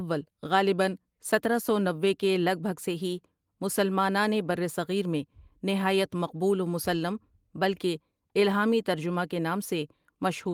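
No technical faults are audible.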